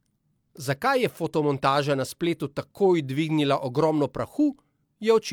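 No technical faults can be heard anywhere in the recording of speech, and the signal stays continuous and steady throughout.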